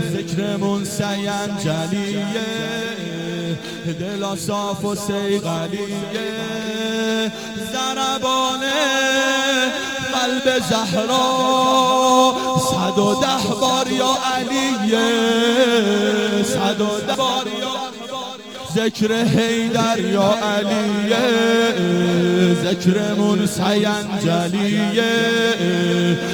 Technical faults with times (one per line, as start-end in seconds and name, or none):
0.00-26.33 sample clock jitter